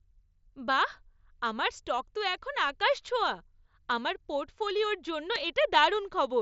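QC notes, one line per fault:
5.35 s, concealed Bluetooth headset packet loss: just after "আমার পোর্টফোলিওর জন্য", a 7.5 ms gap is patched with a copy of the best-matching recent waveform, which fits one lost packet. Unlike a plain dropout, there is no silence or click, and the patch is nearly hidden.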